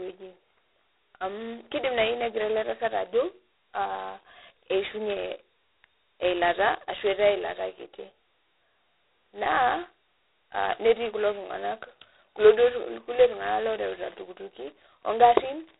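A telephone-band ADPCM coder has squeezed this speech down to very few bits per sample, which fits G.726 ADPCM running in its 16 kbit/s mode. At that rate the coder's adaptive prediction cannot track the waveform closely, so the coarse difference steps leave a harsh, rasping hiss that rises and falls with the speech level throughout. The damage is heavy, and the band is cut off cleanly at about 3.9 kHz, leaving the speech thin and without its upper detail. From 12.57 s to the end at 15.79 s, a nearby Wi-Fi radio is being picked up and rectified by the audio circuit, the classic Wi-Fi interference pattern. Its beacon, sent every 102.4 ms, comes through as a steady ticking close to ten times a second, sitting well beneath the speech at roughly 35 dB down.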